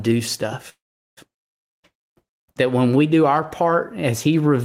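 From 0.69 to 1.19 s a call audio freeze stretches the last sound into a brief fading buzz, then about 0.4 s of silence. Held-up packets likely emptied the jitter buffer. Unlike a dropout, nothing is lost: speech resumes exactly where it stopped, about 0.48 s late.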